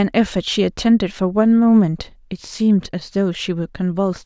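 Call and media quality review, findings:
No faults heard in this recording.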